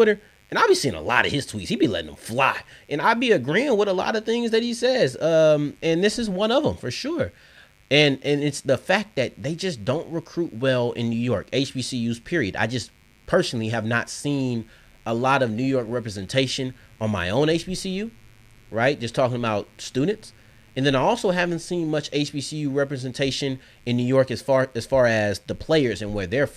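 From start to finish, a mains buzz sits under the speech, roughly 35 dB below it. Sharp switching spikes at twice the 50 Hz mains rate put harmonics well into the kilohertz range, so it sounds like a steady raspy buzz rather than a clean hum.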